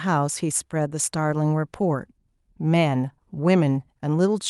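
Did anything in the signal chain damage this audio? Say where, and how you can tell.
No, nothing in the signal chain has damaged this speech recording. No stage between capture and playback leaves an audible mark anywhere in the clip.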